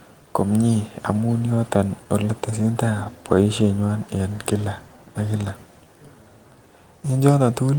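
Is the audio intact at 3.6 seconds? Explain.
No. 3.6 seconds falls inside a stretch affected by clock drift between sender and receiver. The sender's clock runs roughly 4 percent slow relative to the receiver's, so the receiver's jitter buffer keeps draining faster than it is refilled. Left uncorrected, the buffer would run short and the speech would stall. Instead, the receiver compensates continuously, so the mismatch appears as a small, persistent timing instability rather than a single obvious break.

That compensation is the second fault: repeated timing corrections running from 0.16 to 7.77 s, which includes 3.6 s. To keep pace with the slow sender, the receiver repeats short pieces of audio, stretching playback to about 96 percent speed and adding roughly 0.3 seconds in total. The repeats are unevenly spaced, so the speech sounds faintly hiccupy, with a slightly unsteady tempo rather than clean continuous flow.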